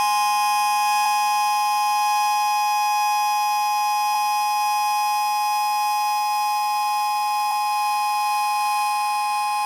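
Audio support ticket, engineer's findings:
Damaged data in a compressed stream: three short glitches at 1.05 s, 4.14 s and 7.50 s, each about 14 ms. Probable component: decoder input, meaning the file or stream upstream of decode. Mechanism: corrupted bytes in the compressed frames at these points cause the decoder to misread or reject those frames and lose sync until it finds the next valid frame header. The result is a brief disruption in the audio each time.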